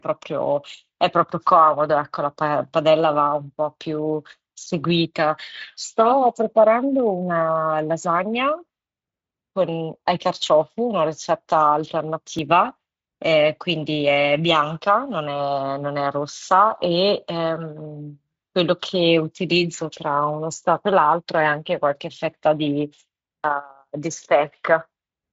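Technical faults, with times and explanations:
12.39 s, dropped buffer (overrun): a tiny jump in the speech, likely a few milliseconds overwritten before collection, leaving the edges spliced together.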